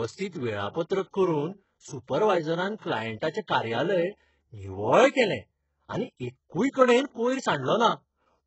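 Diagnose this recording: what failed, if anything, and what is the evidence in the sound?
The codec stage failed: the speech has been squeezed through a very low-bitrate codec, most likely HE-AAC at around 8 kbps. The damage is heavy, and nothing remains above 8 kHz. The upper band is not the original treble but lower bands copied upward and shaped by a coarse envelope, so its harmonics do not line up with those below the crossover, and s sounds come out gritty, metallic or lispy.

The same transform coding also produces pre-echo, at 0.28 to 0.33 s, 0.69 to 0.75 s, 2.79 to 2.82 s, 3.20 to 3.22 s, and at 3.47 s. Each time, the coder spreads quantisation noise across a whole block. Noise sized for a sharp onset late in the block leaks into the quiet just before it, as a short hiss of 10 to 58 ms that blurs the attack.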